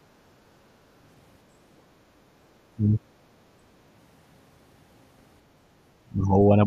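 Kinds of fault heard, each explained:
Speech suppressed in double talk: The speech dips sharply from 2.75 to 3.12 s and again from 6.05 s to the end, falling by roughly 20 dB. This is likely an echo canceller mistaking the talker for loudspeaker echo while both sides spoke.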